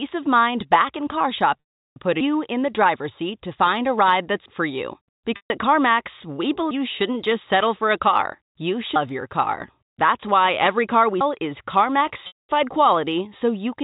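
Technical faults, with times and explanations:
1.61–1.96 s, 5.36–5.50 s and 12.27–12.49 s: packet loss with pitch repetition. The first follows "mind back in car", the second follows "for you". The gaps last 360, 140 and 220 ms, which fits lost packets of 20 ms each. The receiver fills each hole by repeating the last pitch cycle. That gives a brief held buzz. It fades out within about 50 ms, so the rest of each gap is silent. Then the speech returns through a short cross-fade.
4.46, 6.71, 8.96 and 11.21 s: audio missing between chunks. The last one comes right after "why every car we". The skips come every 2.5 s, so they are regular. At each one, roughly a third of a second of speech is gone. The two sides are butted together with no silence, so the speech jumps forward and part of a word vanishes. The likely cause is a recorder or processor dropping audio while it closes one 2.5 s chunk and opens the next.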